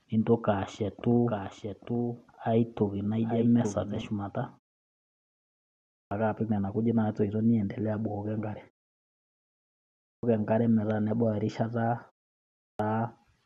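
From 1.28 to 4.02 s there's a doubled audio track: a second full-band copy of the speech running about a second behind, roughly 5 dB down, with no room colour. It cuts in and out abruptly, likely a slower capture path feeding the same audio twice.

Then there's a clipped start after a pause at 5.78 s, 9.88 s and 12.46 s. After silences of 1.27 s, 1.26 s and 0.43 s, the output device needs time to wake, so 0.33 s, 0.35 s and 0.33 s of speech are lost. Each phrase jumps in abruptly, missing its opening sounds, while the pauses themselves go quiet as expected.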